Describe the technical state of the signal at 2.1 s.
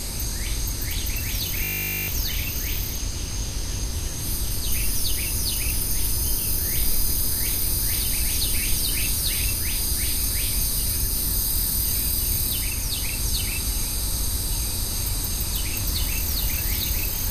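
A steady 50 Hz buzz, just ending at 2.1 s, runs from 1.64 to 2.08 s. This is a system hang loop: the system froze while the hardware replayed one 20 ms buffer about 22 times, so roughly 0.4 s of audio is missing.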